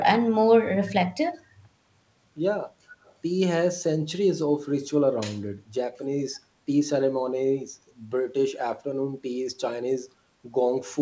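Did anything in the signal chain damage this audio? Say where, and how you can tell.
Yes. From 3.04 to 3.13 s a very faint, delayed copy of the speech surfaces, lagging the original by about 0.29 s and sitting far below it in level. This points to call processing, most likely an echo leak: the far end's loudspeaker output reached its microphone, and its echo canceller did not fully subtract it before sending it back. The audio is band-limited at 8 kHz, consistent with a wideband call codec such as G.722.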